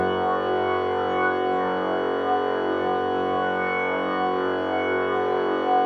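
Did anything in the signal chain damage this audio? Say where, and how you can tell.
No, nothing in the signal chain has damaged this audio. Across the whole clip the everyday sound keeps the same character at every moment, with no point where a stage in the chain breaks into it.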